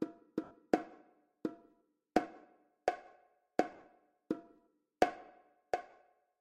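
At 0.44 s, 3.72 s and 5.90 s, lost LE Audio frames leave short smeared patches, about 70 ms, 70 ms scattered across 0.12 s, and 30 ms. Rather than a hard silent gap, the LC3 decoder refills them with randomized repeats of the last spectrum, so tones dissolve into noise.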